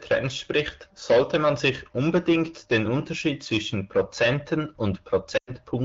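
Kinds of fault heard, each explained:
Lost AMR speech frames: Damaged frames were filled by reusing earlier speech settings with falling gain. Near 5.4 s, the sound drops to near silence for about 0.1 s.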